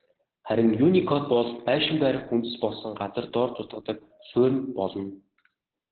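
From start to finish the speech sounds muffled, hoarse and slightly robotic, with nothing above about 4.2 kHz. This is heavy Opus voice compression: its SILK coder cut the band to narrowband and coded the excitation coarsely, which points to a bitrate near 8 kbps.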